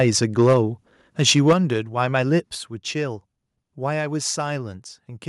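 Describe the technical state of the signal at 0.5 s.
At 0.5 s the speech is in microphone overload, running from 0.00 to 0.57 s. Peaks are flattened, roughly 5 dB too hot, giving a harsh crackle. The input gain was likely set too high. At 0.53 s the level drops abruptly by about 2 dB. This fits a microphone volume stepped down by software reacting to the clipping.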